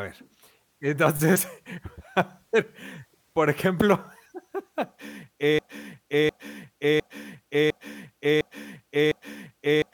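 At 5.59 s the speech locks into a broken-record loop: a 0.71 s fragment plays six times back to back, identical each pass, and the loop carries on to the end of the clip. The likely cause is a stall in the player, encoder or stream, which kept resending the last chunk it held instead of new audio. Whatever should have followed 5.59 s is missing, replaced by this mechanical stutter.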